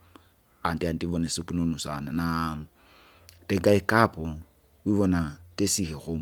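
Throughout the recording, a Bluetooth LC3 compression stage likely thinned the upper spectrum and filled the gaps with synthetic noise, consistent with 10 ms frames near 48 kbps. The speech carries a plainly audible breathy, grainy edge, with nothing above 20.2 kHz.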